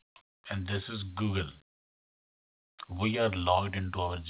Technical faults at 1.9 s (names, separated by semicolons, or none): none